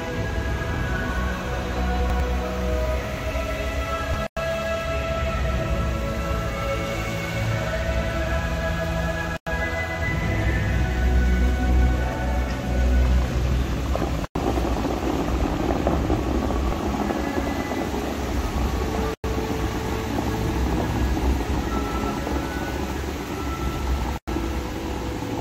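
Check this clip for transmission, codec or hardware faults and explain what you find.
Three kinds of fault are present: chunks out of order, damaged data in a compressed stream, and regular gaps between chunks.

Chunks out of order occur at 2.0–2.2 s and 19.8–20.0 s. In each, one 100 ms block plays one position late, swapping with its neighbour. No audio is lost, but the sequence is scrambled and the three hard joins produce a brief jumbled stutter.

Damaged data in a compressed stream appears at 4.14 s, 10.07 s and 16.70 s. Corrupted bytes make the decoder misread the affected frames and resynchronise on the next frame header. Each instance is a very short chirp or blip of under 20 ms.

Gaps between chunks fall at 4.27 s, 9.37 s, 14.25 s, 19.14 s and 24.18 s, each 100 ms of silence. The spacing fits audio delivered in roughly 5-second chunks, with each chunk starting late or padded at the join. 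They are heard as short holes or dips at a steady interval.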